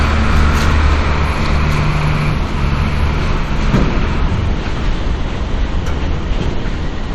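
No technical faults can be heard at any point in the sound.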